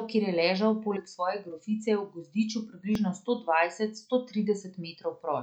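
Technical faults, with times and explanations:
2.95 s, dropped buffer (overrun): a small forward jump in the speech, just before "sto dvajset sto". Only a few milliseconds of audio are missing, and there is no gap of silence; the material on either side is butted together, so the waveform changes abruptly at the join. The likely cause is the capturing program failing to read a buffer before the hardware overwrote it.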